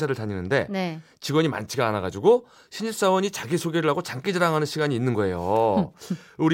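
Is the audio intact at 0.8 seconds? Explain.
Yes, the speech at 0.8 seconds is intact, with no audible fault at that point.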